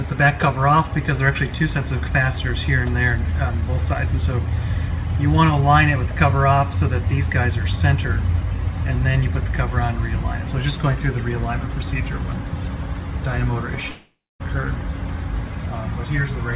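A long network dropout, likely a gap where packets stopped arriving, interrupts the audio from 13.9 to 14.42 s. The receiver carries the last sound forward as a fading buzz, then about 0.26 s of near-silence, before the audio resumes with that half-second lost. The call path, band-limited to 4 kHz, fits G.711 mu-law at 64 kbps.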